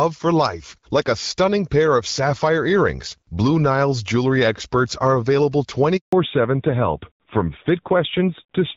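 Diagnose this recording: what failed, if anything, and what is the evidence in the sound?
A handover gap at the network stage cuts the speech right after "jewelry experts are available": the sound dies away quickly and stays silent from 5.97 to 6.13 s, a 160 ms hole. The waveform drops flat and the spectrogram shows a blank vertical band.

Fallback to narrowband follows at the codec stage from 6.13 s to the end. Everything above 4 kHz disappears and the speech turns duller and rougher. On a spectrogram the content above 4 kHz cuts off sharply. The switch fits a drop from AMR-WB at about 12.65 kbit/s to AMR-NB at about 7.4 kbit/s.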